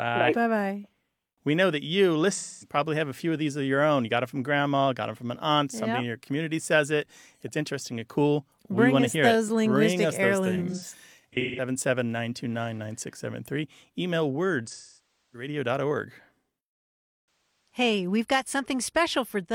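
Smeared, noisy patches from AAC frame loss with concealment occur at 2.32–2.76 s (between "know that you" and "have a few of"), 10.55–11.64 s, 14.66–15.48 s and 17.67–17.78 s (before "we've got"). The decoder is rebuilding the missing frames from the last good spectrum.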